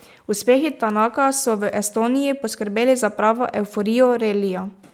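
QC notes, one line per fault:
No technical faults were found; the signal holds steady across the whole recording.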